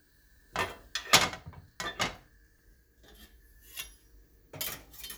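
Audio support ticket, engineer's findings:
Repeated buffer at 2.59 s: brief click-buzz. A 1.45 ms block, which fits a 64-sample buffer, is played four extra times when new audio arrives late, losing roughly 5 ms. The waveform shows identical tiled cycles, and the spectrogram a short vertical streak with a harmonic comb near 690 Hz.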